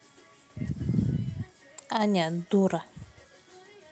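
At 0.67 to 0.69 s and again at 1.77 to 1.79 s, the sound turns briefly rougher and noisier for about 20 ms, with no dropout. Each is a lost packet rebuilt from error correction: the length points to a single missing Opus packet, and the next packet's low-bitrate in-band copy was decoded in its place. That copy fills the gap but carries less detail than the Opus call stream around it.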